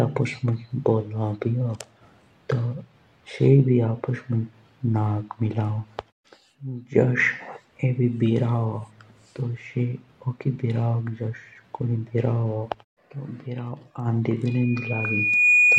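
Speech, with loudspeaker feedback squeal from 14.46 s to the end: a 2.5 kHz tone swells over about a second to roughly 10 dB above the voice, unlike a steady interference whine.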